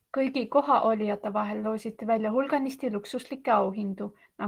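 Nothing in this speech recording stood out as a technical fault on listening.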